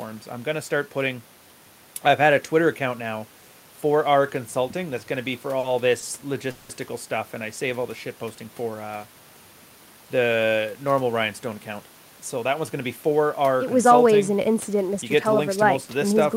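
At 5.59 to 5.66 s and again at 5.99 to 6.05 s, there is a short stall from a late packet. The jitter buffer ran dry, so the last sound is held for about 40 ms, then 30 ms. Nothing is lost. Each instance sounds like a brief smeared hold.

From 6.51 to 6.72 s comes a call audio freeze. The sound is extended for 180 ms as a fading buzz, never dropping to silence, then resumes where it stopped. Packets were likely delayed in transit, emptying the jitter buffer.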